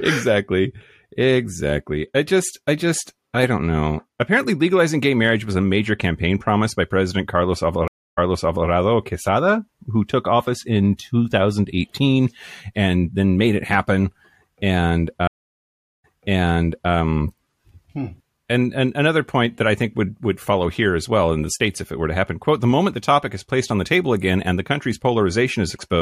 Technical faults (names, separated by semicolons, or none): stream reconnect